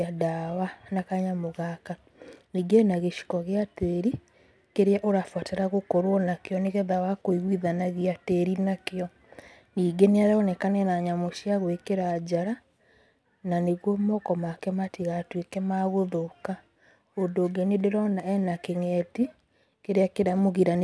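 Aliasing runs throughout this speech: content above 11 kHz folds back as faint gritty, metallic tones, unlike plain low-pass dullness, which fits resampling down to 22 kHz without filtering.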